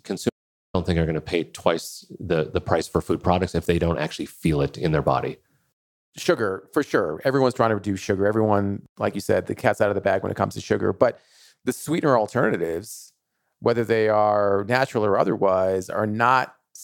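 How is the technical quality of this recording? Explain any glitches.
The recording has one clear glitch near the start. An audio dropout to silence runs from 0.30 to 0.74 s. The input was likely lost briefly while writing continued, so about 0.45 s of speech becomes silence, with the room tone gone too, before the voice abruptly resumes.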